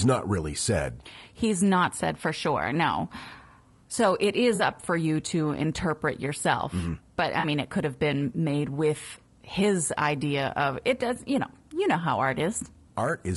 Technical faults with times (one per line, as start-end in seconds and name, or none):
0.00-13.36 low-delay AAC compression
4.55-4.61 AAC frame loss with concealment
7.39-7.45 AAC frame loss with concealment